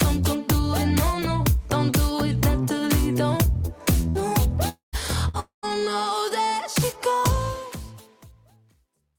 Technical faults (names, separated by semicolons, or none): burst of packet loss; long network dropout; truncation distortion on a fade